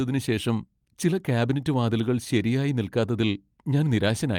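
No technical faults can be heard anywhere in this speech recording. Nothing in the audio breaks up, drops out or distorts at any point.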